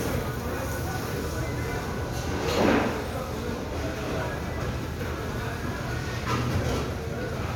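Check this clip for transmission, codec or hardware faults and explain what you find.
No transmission, codec or hardware faults.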